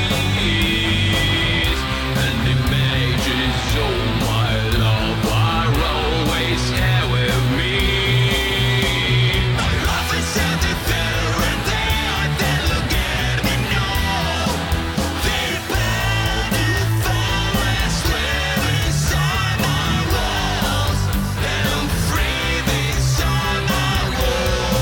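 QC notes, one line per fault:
No faults found on this pass; nothing to log.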